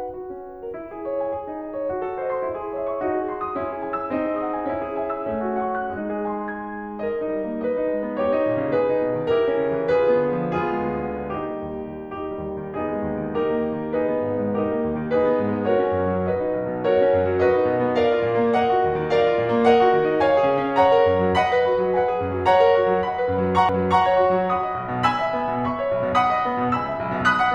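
Music, with a CD skip at 23.69 s: a tick and a near-instant dropout of a few milliseconds as the laser jumps tracks, seen as a hairline gap and discontinuity.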